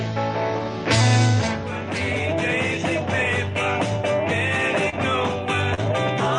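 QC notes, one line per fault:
4.89–4.94 s and 5.74–5.80 s: short concealed packet loss. About 20 ms and 40 ms of audio arrived too late. The receiver extrapolated the preceding sound to fill each gap, then crossfaded back, leaving a brief smear or wobble in the call-codec audio.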